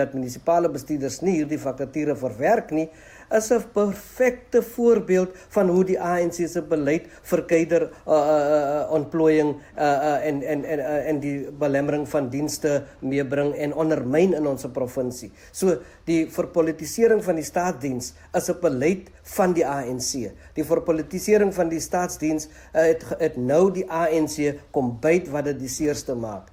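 No audible technical faults.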